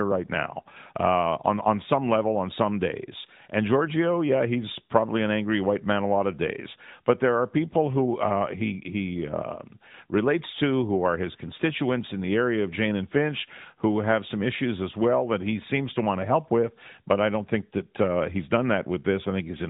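No technical faults can be heard in this speech; the audio has the limited bandwidth of the AMR narrowband mobile codec, with nothing above 4 kHz.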